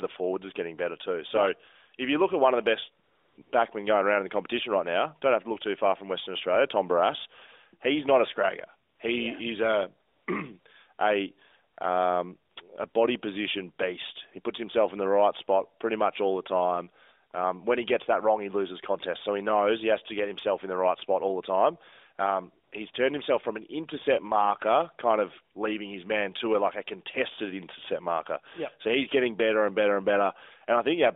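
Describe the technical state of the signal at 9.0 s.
AMR comfort noise runs from 8.9 to 9.0 s: for about 100 ms the phone sent no speech frames, so the receiver substituted smooth synthetic noise for the real background, heard as a brief flat hiss.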